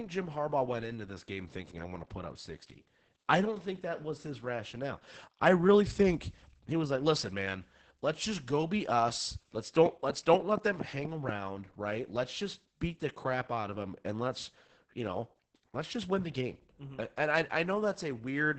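Opus voice compression throughout: SILK coding caps the band near 8 kHz and coarsely codes the excitation, so speech sounds muffled, hoarse and robotic, consistent with about 10 kbps.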